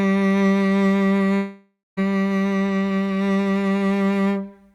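At 1.37 s the music turns into a buzzy smear of its last sound that fades out, leaving about 190 ms of silence before it resumes at 1.99 s with 600 ms skipped. This is likely a long network dropout: the receiver padded the gap, then gave up.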